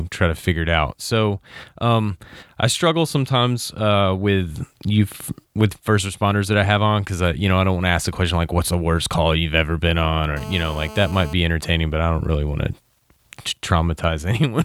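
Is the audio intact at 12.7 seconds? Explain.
Yes, at 12.7 seconds the audio is intact, with no dropout, click, distortion or other fault to be heard at that moment.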